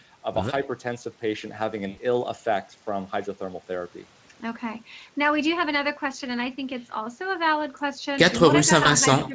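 VoIP packet loss concealed by the speech codec occurs first at 1.89 to 1.99 s. The decoder got nothing for a gap of 80 ms, which fits about four lost frames. It filled the hole by repeating its last pitch and spectral shape at falling gain. The speech smears into a short buzzy or noise-like, fading sound and stays weak for a moment after the stream resumes.

An echo leak follows at 8.33 to 8.40 s. A faint copy of the speech returns 129 ms late, roughly 15 dB under the direct sound. This is most likely a loudspeaker on one side whose echo canceller left part of its microphone pickup in place and sent it back.

VoIP packet loss concealed by the speech codec recurs at 8.83 to 8.90 s. This is a shorter dropout of 20 ms, pointing to a single missing frame. The decoder's extrapolation shows as a brief smear. Because each rebuilt frame leans on the previous one, the distortion carries a little past the gap itself.

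The echo leak returns at 9.21 to 9.28 s. It has the same 129 ms delay and is weaker, about 20 dB down, heard as a quiet repeat trailing the speech.

Speech suppressed in double talk comes right after, from 9.28 s to the end at 9.35 s. The speech dips by roughly 5 dB over about 70 ms, sounding briefly pulled back. This is likely the echo canceller failing to separate talker from echo while both were active and attenuating everything together.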